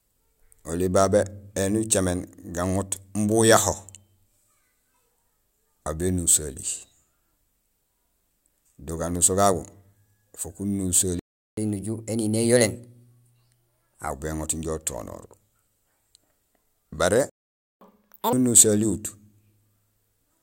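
At 11.19 s the speech cuts out in a playback stall. Silence lasts about 0.38 s, until 11.57 s. The player likely ran dry of data or had its thread blocked. From 11.57 to 14.10 s comes catch-up at higher speed. The backlog is resampled at 1.15 times normal speed, so speech sounds hurried and pitch rises by roughly two semitones. At 17.30 s a second stall silences the audio for about 0.52 s, until 17.81 s, again likely from starved or blocked playback. A harsher catch-up follows from 17.81 to 18.33 s. Speed doubles, and pitch jumps close to ten semitones before settling back.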